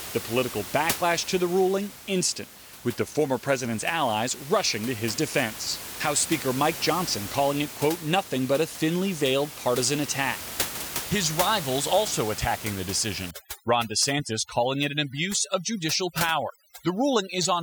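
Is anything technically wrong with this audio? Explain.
Yes. From 13.31 s, just after "rivals also attacking the", to 17.62 s, there is overdone noise removal. A noise reducer set too strong mutes any frequency band near the room noise, which sits about 11 dB under the speech, and takes quieter parts of the voice with it. The background drops and breaks up into twinkling specks. Unlike codec artefacts, the damage tracks the noise floor rather than the complexity of the signal.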